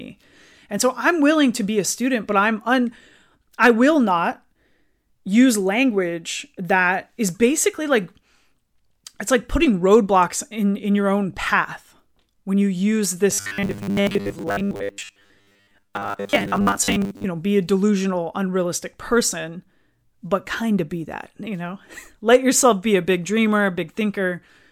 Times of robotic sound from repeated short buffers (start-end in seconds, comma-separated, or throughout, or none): 13.31-17.26